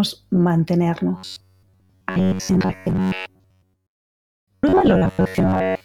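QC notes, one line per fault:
1.17–5.85 s robotic sound from repeated short buffers: a rigid metallic buzz at 93.8 Hz, likely from a 10.7 ms block replayed while most audio is skipped. The spectrogram shows fixed, evenly spaced harmonic lines, and the waveform repeats identical cycles.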